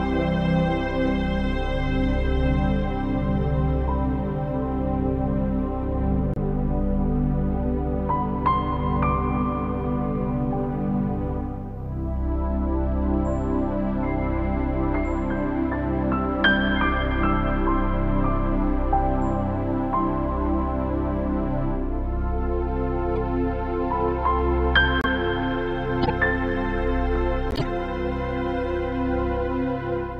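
Short chirps and noisy blips cut through at 6.34–6.38 s, 23.16 s, 25.01–25.06 s, 26.03–26.10 s and 27.51–27.66 s. The last is longest, and the later ones are loudest. Each is a corrupt frame decoded: damaged compressed data was played anyway, misplacing energy across frequencies.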